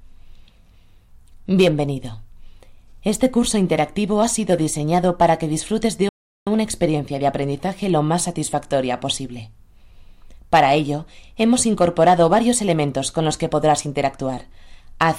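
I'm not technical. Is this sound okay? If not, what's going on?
No, there's a playback stall: at 6.09 s the sound cuts out for about 0.38 s, likely because the player briefly ran out of data, then resumes at 6.47 s.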